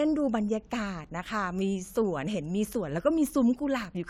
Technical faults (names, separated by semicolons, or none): none